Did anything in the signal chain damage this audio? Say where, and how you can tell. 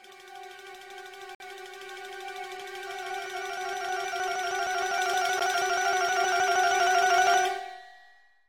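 Yes, at the playback stage: a gap between stream segments. Segment time stamps leave holes the player fills with silence, hard-edged cuts from 1.35 to 1.40 s and briefly at 5.40 s. Their four-second spacing fits 4 s segments; no audio is lost.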